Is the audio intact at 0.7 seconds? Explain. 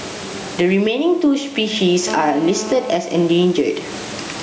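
No, at 0.7 s the speech has gain pumping throughout: the gain ducks under loud sounds by roughly 15 dB, likely from an over-driven limiter, unlike gating, which mutes gaps.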